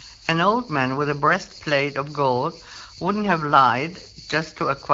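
Nothing goes wrong anywhere in this speech; it's carried over the AMR wideband (HD Voice) codec at 12.65 kbit/s, where the coding leaves only a light touch on the sound and no faults turn up.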